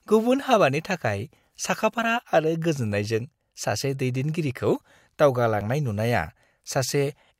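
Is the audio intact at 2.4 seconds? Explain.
Yes, at 2.4 seconds the speech runs intact, with no dropout, click, distortion or other fault audible at that moment.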